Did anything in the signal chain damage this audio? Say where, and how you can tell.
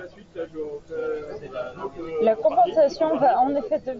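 No, nothing in the chain has damaged this speech; it comes through a Bluetooth mSBC headset link, so the top end stops around 8 kHz, which is just how that wideband headset path sounds.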